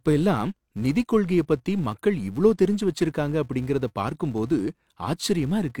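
Filter restarted on every block, throughout the speech. The filter in the processing chain loses its internal state at each block boundary and begins every block as if from silence, so a small transient appears at the start of each one. These blocks arrive every 5 ms, giving a buzz at 200 Hz that rises and falls with the level of the speech, quieter in soft passages and stronger in loud ones.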